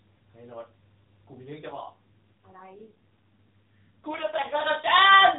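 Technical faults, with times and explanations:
1.70 to 4.56 s, AMR rate drop: the speech turns rougher, buzzier and more synthetic, with no gap and no change in bandwidth. This fits the mobile codec stepping down from its 12.2 kbps mode to about 5.9 kbps, leaving fewer pulses to model each frame.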